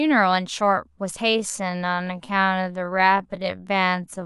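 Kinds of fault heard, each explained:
Time-stretched section: From 1.26 s to the end, the speech abruptly slows to 0.62 times its pace while its pitch stays unchanged. The slowed part drags. The likely cause is software repeating short pieces to lengthen the audio.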